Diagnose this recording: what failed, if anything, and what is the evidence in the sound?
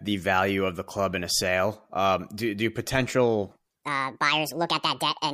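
From 3.51 s to the end at 5.33 s, a section at the wrong speed: the speech abruptly turns high and hurried, running 1.61 times too fast and raised about seven semitones. On a spectrogram the harmonic stack and formant bands jump upward at 3.51 s and syllables narrow in time, while the waveform's envelope compresses. The likely cause is a playback or editing stage clocking this section at the wrong sample rate, so speed and pitch shift together.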